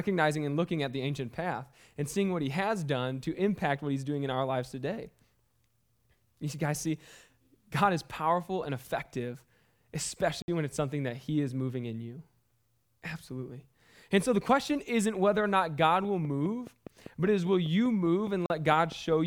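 Block of digital silence at 10.42 s: for 60 ms, until 10.48 s, the speech drops to silence and then returns. No fade smooths either edge, and the 60 ms gap is heard as a brief hole in the speech. A stretch of output samples was left unfilled, which points to the playback or processing chain missing its deadline for that buffer.

Train of clicks from 16.05 s to the end of the clip: sharp, near-identical clicks arrive at a steady 4.95 per second, about as loud as the speech itself. They tick straight through the speech and any pauses. Their even spacing and uniform shape suggest something periodic outside the audio, most likely interference from nearby equipment or a faulty connection or power supply.

Block of digital silence at 18.46 s: a second dropout to silence, this one 40 ms long and ending at 18.50 s, falls inside the click train. Its edges cut in and out abruptly, and it opens a shorter hole in the speech than the first.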